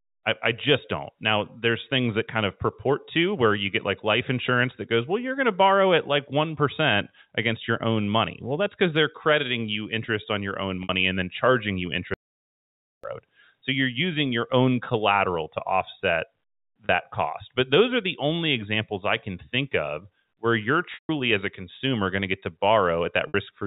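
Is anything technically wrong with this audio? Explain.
Yes. Two kinds of fault can be heard in this telephone-band speech.

Packet loss with pitch repetition: at 10.83 s (after "interest on your own"), 16.86 s, 20.94 s (after "think of where you're") and 23.28 s, the voice briefly freezes into a held, buzzy tone, lasting 60, 30, 150 and 60 ms. The longest fades toward silence before speech resumes with "as a consumer going". These gaps fit lost 30 ms packets. The receiver covered each one by repeating the last pitch cycle and tapering it off.

Audio dropout to silence: from 12.14 to 13.04 s, just after "and then charging you", the sound cuts to silence for about 0.9 s, with no room tone, and picks up again mid-flow. The likely cause is a brief loss of the input, with silence written in its place. Anything said during that gap is gone.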